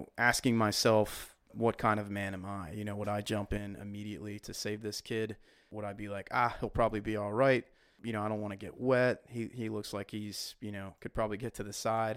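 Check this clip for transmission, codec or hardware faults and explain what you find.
One fault: one channel drops out at 3.58 s and stays gone to the end at 12.17 s. The speech falls abruptly by about 6 dB there, with no ramp, and sounds the same otherwise. That step is the likely cause signature of a lost stereo channel. Once summed to mono, the surviving side carries only half the shared signal. A gain fault or fade would instead slide or land on an arbitrary level, and no channel-only content would vanish.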